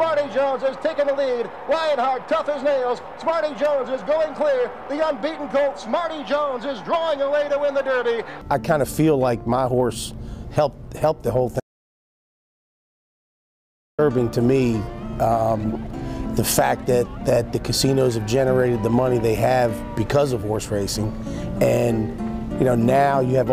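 At 11.6 s the audio drops out to silence. The sound cuts off abruptly and returns at 13.99 s. The gap lasts about 2.38 s. It is plain silence, with no room tone. The likely cause is a lost input while recording continued.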